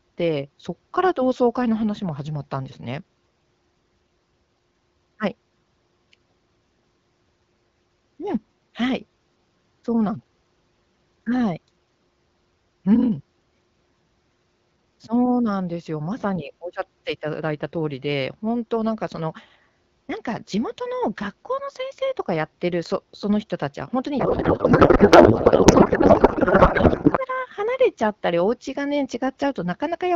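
Throughout, sample clock jitter adds a faint hiss, roughly 50 dB down, that swells with loud, bright speech and vanishes in pauses, unlike steady background noise. From 24.19 to 27.17 s, a codec payload misread, octet-aligned AMR decoded as bandwidth-efficient, replaces speech with garbled warble rather than the silent gaps of packet loss.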